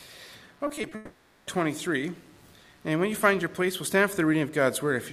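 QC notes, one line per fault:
0.67–0.93 s, repeated packet loss (robotic sound): four short holes, none over 20 ms, patched by repeating prior sound, giving choppy texture; spectrogram shows smeared, stuttering frames.
0.95–1.49 s, long network dropout: about 0.52 s of smeared, held buzz or hiss replaces the audio, likely from a long dropout; waveform shows repetitive decaying texture, never flat silence.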